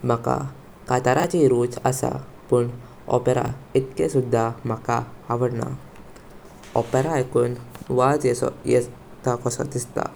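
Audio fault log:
1.2 s and 3.46 s: chunks out of order. A 20 ms chunk plays one slot late, swapping neighbours with three hard joins, so the speech jumbles briefly, yet nothing drops out.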